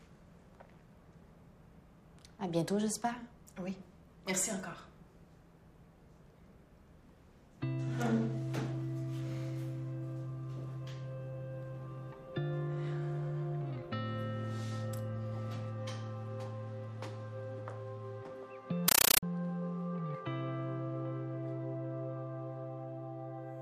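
Undecoded compressed data reached the output as samples from 18.88 to 19.23 s, a compressed stream played as audio, heard as very loud static chattering 31.25 times a second.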